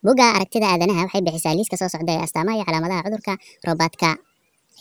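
High, hurried speech runs through the whole clip, with every voice pushed up by about seven semitones and moving half again as fast as natural talk, so the cadence feels rushed and the timbre thin and chipmunk-like. It is a wrong sample rate fault: audio captured at 32 kHz is being played back at 48 kHz with no conversion, and that 1.5 ratio raises speed and pitch together, which is why neither sounds natural.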